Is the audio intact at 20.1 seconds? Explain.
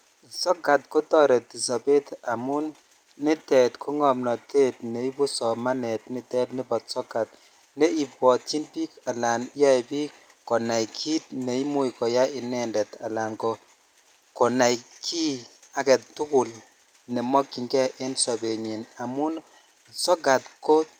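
Yes, the audio is intact at 20.1 seconds, with no dropout, click, distortion or other fault at that moment.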